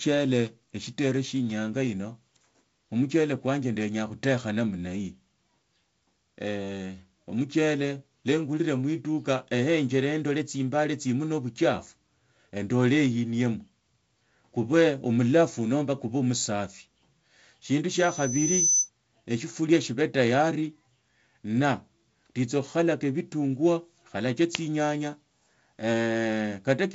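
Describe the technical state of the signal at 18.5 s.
At 18.5 s a loudspeaker feedback squeal (17.91–18.90 s) rings at 6 kHz, swelling over most of a second to stand a few dB above the speech, a bright horizontal spectrogram line.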